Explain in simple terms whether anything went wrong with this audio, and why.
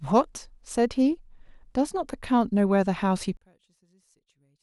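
From 3.37 s to the end, the speech suddenly drops to almost nothing, leaving only a faint trace. This is likely one channel inverted: with one stereo side flipped in polarity, the shared centre sound cancels itself out when both sides are combined into one.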